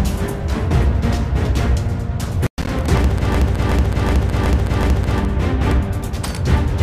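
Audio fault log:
3.34–5.20 s, system hang loop: one 0.37 s slice repeats identically five times at 2.69 Hz, a machine-gun stutter from hardware replaying a stalled ring buffer, consistent with a 16384-sample buffer. Repeats are exact copies, unlike a dropout, and almost nothing goes missing.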